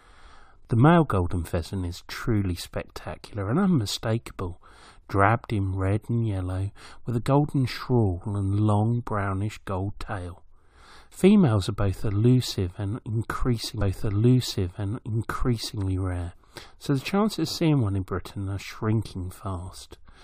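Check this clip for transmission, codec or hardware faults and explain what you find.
One transmission fault is present: a stream segment repeated. From 13.81 s to 15.80 s, about 2.0 s of speech plays a second time. The player fetched or queued the same chunk of the stream twice, so it stepped back and replayed it. A small blip marks the jump back. The programme then continues with "rare so the chances", now 2.0 s later than it should be.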